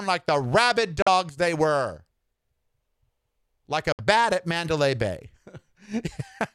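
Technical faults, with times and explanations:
1.02–1.08 s and 3.92–4.00 s, Bluetooth dropout: likely audio packets missed their delivery deadline over the wireless link and were discarded, so playback had nothing to output. The sound cuts to silence right after "like the rabid" and returns at "they were", then cuts again after "like a". Each hole lasts roughly 60 and 80 ms. Speech resumes further along rather than where it stopped, because the lost stretch was skipped, not delayed.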